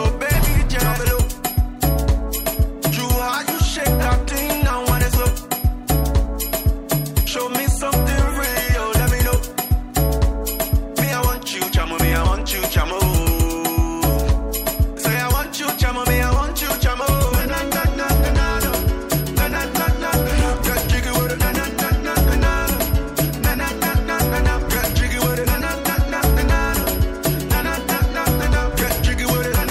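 No technical faults can be heard anywhere in this audio.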